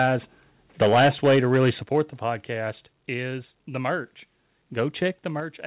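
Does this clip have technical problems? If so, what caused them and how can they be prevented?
Yes. Harsh, crackling distortion on the loudest peaks at 0.0–0.08 s and much more heavily at 0.81–1.7 s, where peaks push about 11 dB past the limit and roughly a tenth of samples are flattened, is microphone overload, likely from input gain set too high. Set the microphone input lower so peaks stay well below full scale.

Sudden level drops at 0.82 s (about 2 dB), at 1.83 s just before "the podcast is the" (about 7 dB), at 2.85 s between "the podcast" and "is the merch" (about 3 dB), and at 5.4 s (about 4 dB) are the microphone volume stepped down, likely by the call software's automatic gain adjustment reacting to the clipping. Start with a sensible fixed input level, or turn off automatic microphone adjustment, so the software has no reason to step the level down mid-call.

The call path's narrow band, with nothing above 4 kHz, fits a G.711 A-law call codec.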